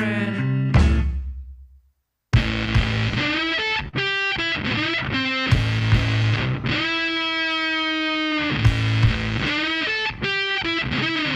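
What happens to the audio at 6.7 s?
At 6.7 s the sound sits inside a stretch of scattered short gaps running from 5.55 to 7.12 s. A handful of packets went missing or arrived late, each hole around 10 ms at most, and the receiver bridged each one by extending the preceding sound, leaving brief ticks or smears.

The same moment falls within repeated timing corrections spanning 0.64 to 11.24 s. Playback runs at about 99% speed, with the receiver inserting short repeated slices, roughly 150 ms in total, at uneven intervals. If heard at all, these come across as faint hiccups and a slightly unsteady tempo.

Underlying both is clock drift between sender and receiver, present throughout the clip. The sender's clock runs around 3% slow relative to the receiver's, so the jitter buffer keeps draining and the receiver must keep padding the stream, which produces the recurring small stretch-and-repeat artefacts.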